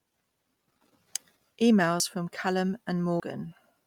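From start to finish the speech carries a grainy, breathy edge on consonants and vowels, with the upper band sounding rough and noise-filled rather than clean. This plainly audible damage is most likely Bluetooth LC3 compression. The transform codec works in 10 ms frames and, short of bits, zeroes parts of the high spectrum and fills them with noise. The degree of damage fits a rate around 48 kbps.

At 0.72 s there is an abrupt jump forward in the speech, where roughly a tenth of a second of audio is missing and the two edges are butted together with no silence between them. This is likely a dropped buffer (overrun), in which the program failed to read samples before the hardware overwrote them. Shorter skips of the same kind, each losing roughly 40 ms, occur at 2.0 s and 3.2 s, heard as a brief discontinuity.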